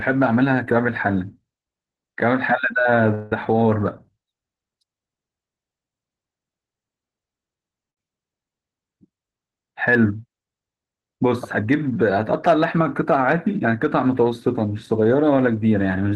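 A speech recording carried over a call path, with band-limited, coded sound that fits Opus at a modest rate and a top near 12 kHz. From 3.14 to 3.32 s the sound stalls. The last sound is stretched into a fading buzz or hiss for about 170 ms. Then speech picks up exactly where it stopped, with nothing lost. This is a call audio freeze, likely from delayed packets emptying the jitter buffer. At 7.90 to 7.98 s there is a burst of packet loss. About 60 ms of concealment holds the last sound and fades it. Speech then resumes about 70 ms further on, so that stretch is gone. From 9.74 to 10.05 s a jitter buffer speed-up plays speech at about 109% speed with unchanged pitch. The receiver trims short pitch-period pieces, roughly 40 ms in all, to shed the extra buffered delay. The passage sounds hurried.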